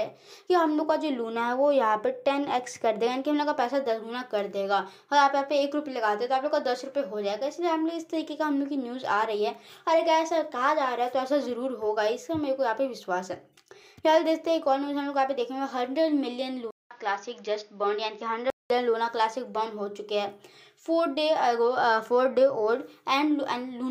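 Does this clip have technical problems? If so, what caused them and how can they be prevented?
Yes. From 16.71 to 18.70 s the sound goes dull, with nothing above 6.8 kHz, a 200 ms gap at the switch, a new noise floor well below the signal, and level roughly unchanged. That's likely the input switching to a poorer device. Lock the input device in settings before recording.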